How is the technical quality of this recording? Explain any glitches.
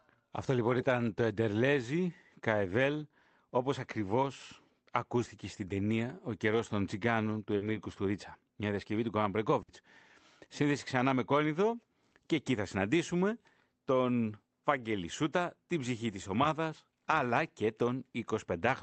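Two network dropouts mark this speech recording, both the kind you get on a packet-based call.

Around 7.57 to 7.65 s, just after "καιρό των τσιγκάνων του", there's short concealed packet loss. About 40 ms never arrived, so the decoder stretched the preceding sound to cover it and blended back in, leaving a quick smear rather than a hole.

At 9.62 to 9.70 s comes a burst of packet loss. Around 60 ms went missing in a row. The receiver carried the last sound forward while fading it, giving a brief held buzz or hiss, and then picked up again with that stretch skipped.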